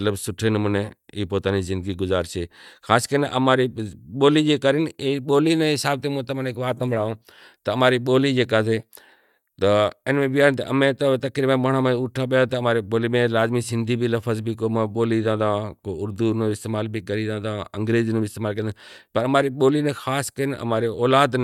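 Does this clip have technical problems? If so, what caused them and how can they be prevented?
No, nothing stood out as a technical problem on listening, so there is nothing here to trace back or prevent.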